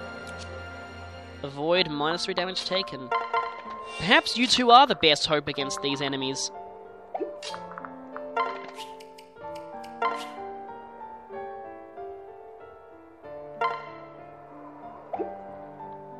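Nothing stood out as a technical problem anywhere in the recording.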